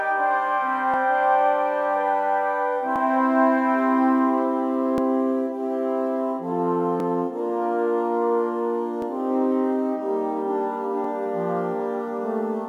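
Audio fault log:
0.94–0.96, 2.96–2.98, 4.98–5.00, 7.00–7.02, 9.02–9.04, 11.04–11.07 s, overlapping chunks: each 2 s chunk restarts early, replaying about 21 ms, a regular stutter where nothing goes missing, unlike a dropout.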